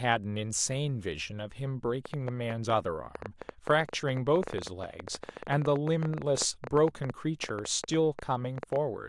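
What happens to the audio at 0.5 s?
Nothing goes wrong at 0.5 s; the speech passes that point intact, with no dropout, click or distortion.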